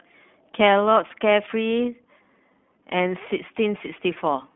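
The whole clip runs through the iLBC codec, and you can hear it right away. The speech sits in a narrow telephone band, roughly 150 Hz up to 3.5 kHz, with nothing at all above 3.7 kHz, so it sounds boxed-in and dull. The codec damage is plainly audible: a rough, slightly synthetic edge on the speech, because each short frame is coded on its own. That fits the 15.2 kbps mode with 20 ms frames.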